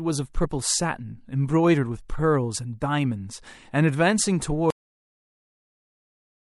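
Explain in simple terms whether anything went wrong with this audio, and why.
Three separate faults affect this speech recording.

The first is MP3 compression, and it is likely the cause of a plainly watery quality that runs through the whole clip. To make the file small, the encoder threw away the quieter details it judged unimportant. Those details flicker in and out from moment to moment, so the voice has a swirl on hissy sounds and blurred starts of syllables.

The second is compressed frames skipped, at about 0.43 s. A small piece of the file, about two of its roughly 26 ms blocks, was lost or rejected as damaged, so playback jumped ahead by around 50 ms. Because those blocks overlap, you hear a quick smeared blip rather than a sharp click, and a sliver of the sound simply goes missing.

The third is a cut-off end at 4.70 s. The final portion of the recording was never written out or played, so the voice stops abruptly in the middle of a sound, with no natural fade. 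From there to the end of the clip there is only dead digital silence.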